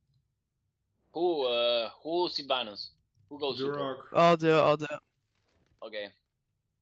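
Nothing is technically wrong with this audio: it has been carried over a WebRTC call path, with the Opus codec limiting the bandwidth to 8 kHz, and that path is working as it should.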